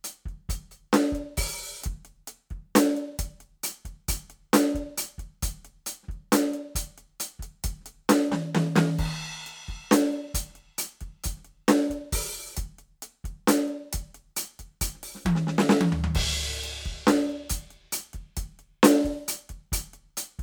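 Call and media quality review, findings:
No faults found in this music.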